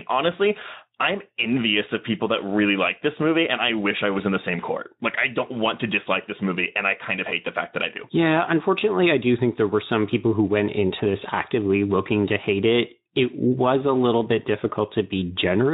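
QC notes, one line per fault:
No faults found: the speech carries only the light coding texture of a Speex path, which fits an encode at around 15 kbps.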